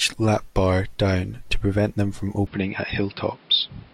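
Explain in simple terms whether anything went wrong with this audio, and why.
Input switched to a poorer device, at 2.47 s, just after "to prevent them from", and lasting to the end. From that moment the speech sounds duller and a little boxy, because nothing above about 5.3 kHz gets through, and a faint new background hiss appears. There's no gap and no jump in loudness at the change. The likely cause is the recording system swapping to a lower-quality microphone or headset partway through.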